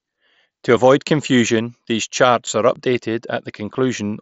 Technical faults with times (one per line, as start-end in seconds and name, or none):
2.46 unconcealed Bluetooth headset packet loss
2.76 audio missing between chunks
3.75 audio missing between chunks